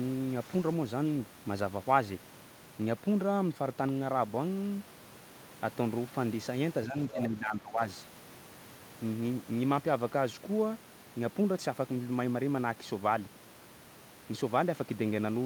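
At 6.86 s the speech briefly dips by around 10 dB for about a tenth of a second, then from 7.12 to 7.8 s it sinks again by a similar amount. This is speech suppressed in double talk, likely an echo canceller that turned down the near talker along with the echo it couldn't tell apart. Overlapping this, from 7.09 to 7.23 s, a faint second voice sits roughly 10 dB below the speech: the other side's voice leaking through, likely loudspeaker echo the canceller failed to remove.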